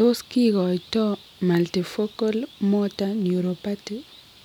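Nothing in this stretch of speech stands out as a technical fault, so there's nothing here to pin to a particular moment.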